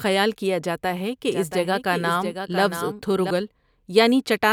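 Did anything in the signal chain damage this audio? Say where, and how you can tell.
Yes. Right after "کیا جاتا ہے", from 1.29 s to 3.31 s, the speech carries a doubled audio track: a second full-band copy trails the original by roughly 0.7 s, about 10 dB quieter. It is likely a second capture through a slower driver or buffer path, or an edit holding two copies out of step. Room echo would decay and take on room colour; this copy stays flat and clean, and it switches on and off abruptly.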